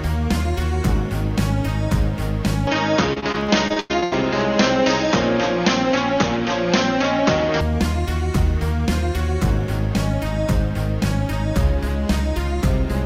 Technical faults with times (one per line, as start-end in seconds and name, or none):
2.67-7.61 input switched to a poorer device
3.13-4.16 repeated packet loss (robotic sound)